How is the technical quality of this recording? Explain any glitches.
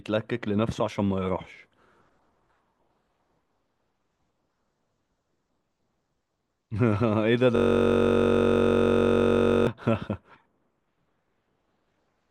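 The recording has one glitch, a system hang loop, from 7.56 to 9.67 s. The computer or its audio driver stopped supplying new audio while the sound hardware kept replaying the last ring buffer. A 21.33 ms slice, which fits a 1024-sample buffer, repeats exactly about a hundred times. Because the slice is so short, the speech freezes into a steady, mechanical buzz at 46.9 Hz for about two seconds.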